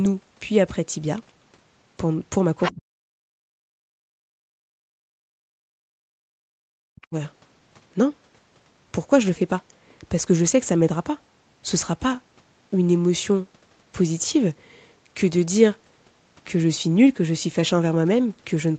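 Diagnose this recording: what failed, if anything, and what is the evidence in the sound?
Call processing let the other side's voice leak through, most likely because the echo canceller left some of the loudspeaker signal in the microphone. From 2.62 to 2.74 s a second, separate voice sits only about 5 dB below the talker. It is a distinct voice rather than hum or a smeared copy of the talker, which rules out analogue crosstalk or a reverberant room. Its timing, immediately before the suppression below, points to echo cancellation at the call-processing stage.

The talker's speech is suppressed in double talk, likely by the echo canceller's suppressor turning everything down while both sides spoke. The talker drops by as much as about 40 dB at 2.71 to 3.02 s, 3.31 to 3.69 s and 4.28 to 4.83 s. The longest drop runs from 5.28 to 7.14 s, with about a second and a half of it affected. These are level dips that come while the other side is also active, so network packet loss or a driver buffer underrun does not fit. 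The steady 8 kHz ceiling comes from the Opus call path and is not part of this fault.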